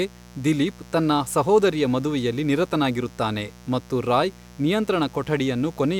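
A 60 Hz mains buzz has got into this speech recording and runs through the whole clip. Some switching device on the supply, such as a dimmer or rectifier, or an unshielded cable, is injecting sharp spikes twice per mains cycle, so the hum carries a dense stack of 60 Hz harmonics reaching up into the kilohertz range. It sits roughly 25 dB below the speech, heard as a constant raspy buzz underneath it.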